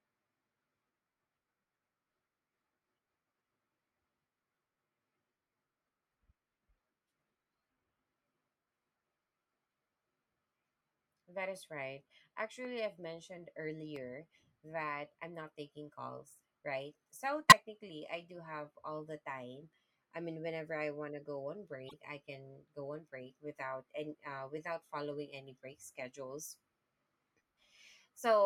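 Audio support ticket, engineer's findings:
Loud pops at 12.65 to 12.67 s and 13.96 to 13.98 s (the second right after "I've mentioned"): two single sharp clicks, roughly 5 dB above the speech, which carries on underneath. Likely an electrical transient from a connector, switch or static discharge.

Corrupt frame decoded at 17.49 to 17.58 s (just before "I do have all"): a loud error peaking near -10 dBFS. Second at 21.88 to 21.94 s, between "want to go on" and "I can go on": a faint error near -40 dBFS. Codec: bit errors in a few compressed frames, decoded anyway, so energy lands at the wrong frequencies.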